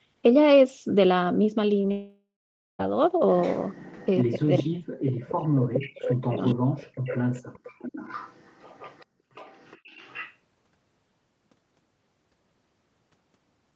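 At 1.81 to 1.85 s, short concealed packet loss: about 20 ms of speech never reached the decoder in time, so the receiver extended the preceding sound and blended back, leaving a brief smear rather than a clean gap.

From 1.91 to 2.81 s comes a likely long network dropout. Roughly 0.88 s of audio went missing. The receiver kept continuing the last sound as a fading buzz, then gave up, leaving about half a second of silence before speech returns with that stretch simply gone.

From 3.41 to 4.23 s there is echo leak, likely from a far-end loudspeaker whose echo canceller let part of the signal back through. A faint copy of the speech trails it by 419 ms, sitting roughly 25 dB below the main voice.

Between 4.25 and 6.61 s, speech is likely suppressed in double talk. With both sides active, the canceller could not tell the talker from the returning echo and clamped down on both, for about two seconds in total. 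The voice dips and breaks up in pieces, losing around 40 dB at its deepest.

Echo leak recurs inside that stretch, briefly at 5.28 to 5.32 s and then at 5.74 to 6.11 s, where the 419 ms copy climbs to only about 10 dB under the speech. From 6.45 to 10.36 s it persists at roughly 20 dB down as a delayed shadow. The Opus call path limits the audio to nothing above 8 kHz throughout.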